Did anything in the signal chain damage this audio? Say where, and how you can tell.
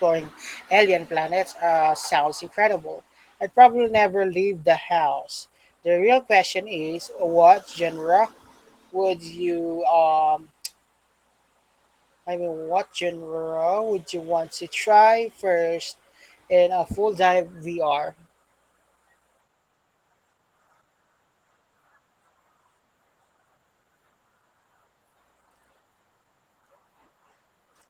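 Yes, at the codec: Opus voice compression runs the whole clip, its coarse excitation coding, which fits about 16 kbps, leaving speech hoarse and slightly robotic.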